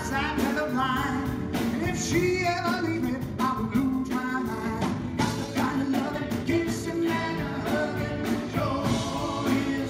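From 2.54 to 7.0 s the audio suddenly runs about 1.63 times faster while its pitch stays put, sounding rushed. This is a time-stretched section, likely from software squeezing the passage to fit a length. On a spectrogram, events crowd together horizontally while frequency bands hold their height.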